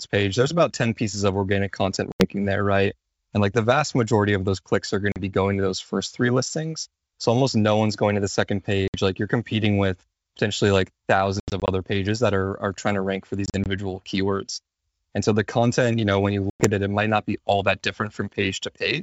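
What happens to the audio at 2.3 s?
Right around 2.3 s the speech is coming back from a hard-edged gap of silence within the stretch from about 2.12 to 2.27 s, and it re-enters with brief, slight distortion before settling. This is packet loss on an ADPCM call: roughly four packets, about 80 ms of audio, went missing and were filled with silence. The G.722 decoder's adaptive predictor and step size then no longer matched the sender's and needed tens of milliseconds to resynchronise.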